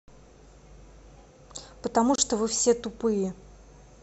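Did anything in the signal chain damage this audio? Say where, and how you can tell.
Yes: the speech drops into a 27 ms silence at 2.16–2.18 s, then resumes. Codec stage: a gap at a join of encoded pieces, where encoder delay and padding were left untrimmed.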